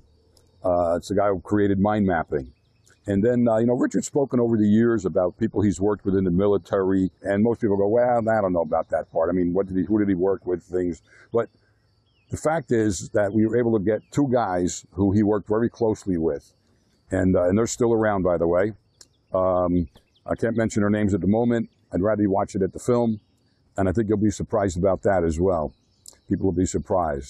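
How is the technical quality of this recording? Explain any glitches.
No glitches or faults audible.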